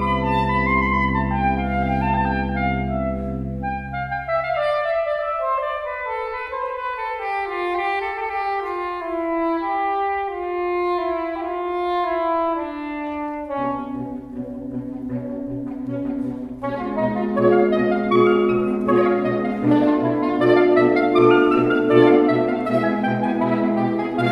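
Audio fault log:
Nothing to log here: I listened all the way and didn't hear a single glitch or problem worth writing down.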